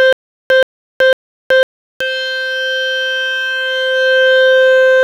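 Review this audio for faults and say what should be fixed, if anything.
The music opens mid-stutter with silent gaps, already under way and lasting until about 2.0 s. A fragment of about 126 ms replays three times, each followed by about 375 ms of digital silence, so it recurs every 501 ms. A likely stalled stream repeated its last buffer on each retry before running dry. Unlike a plain dropout, the same burst returns at a steady pace. Larger playback buffering and smoother network delivery would prevent it.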